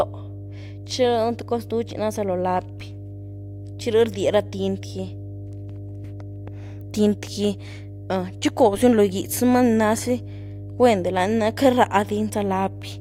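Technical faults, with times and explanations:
Throughout, mains hum: a steady 50 Hz tone with low harmonics sits fairly prominently, around 15 dB under the speech, from power-line coupling through a ground loop or transformer.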